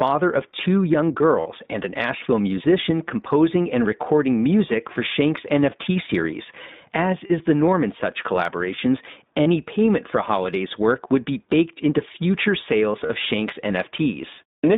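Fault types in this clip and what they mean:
iLBC codec: a narrowband VoIP codec coding each 20 ms frame independently. The speech sits in a telephone band of roughly 150 Hz to 3.7 kHz with nothing above, and carries a plainly audible rough, slightly synthetic edge, which fits a 15.2 kbps mode.
Lost iLBC frames: missing packets were concealed by repeating the last pitch cycle with added noise. Dropouts near 1.40, 5.70, 7.26, 9.42 and 13.06 s last 20 to 60 ms, each heard as a brief held, slightly buzzy or breathy vowel before clean recovery.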